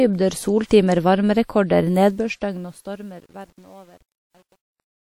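From 2.03 s the speech fades out with truncation distortion. The fade is being cut down to too few bits with no dither, which fits about 9-bit resolution, so the quiet tail turns into coarse steps and sounds gritty, worst from 2.77 s to the end.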